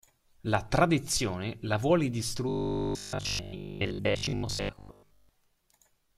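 Robotic sound from repeated short buffers runs from 2.49 to 5.29 s. The speech hardens into a metallic 50 Hz buzz that loosely tracks the words, likely because audio arrived too seldom and a 20 ms chunk was looped over most of that stretch.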